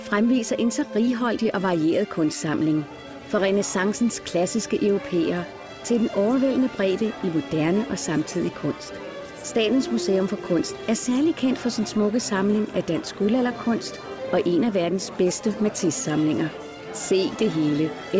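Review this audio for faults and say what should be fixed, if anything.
Nothing stood out on listening, so there is nothing here that needs fixing.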